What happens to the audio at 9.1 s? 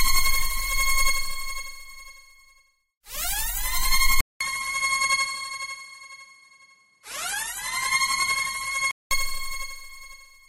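At 9.11 s the sound clears up again, ending a dull stretch that began at 4.21 s. The likely cause is an input switched to a poorer device. That span passes nothing above 11.8 kHz. It sits a few decibels quieter over faint new noise, after a 200 ms silence.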